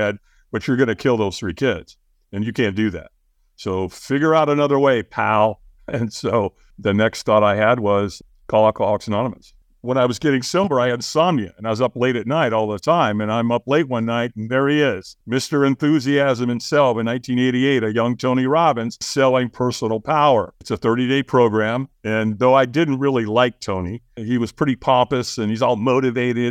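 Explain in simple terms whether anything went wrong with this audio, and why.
Nothing went wrong with this audio that can be heard.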